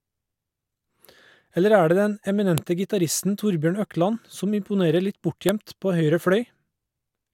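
At 2.58 s and again at 5.49 s the speech gets a sharp, loud snap: that's a file header played as audio. Separate WAV pieces were joined with their headers left in, so those header bytes play as samples, jumping out regardless of the speech around them.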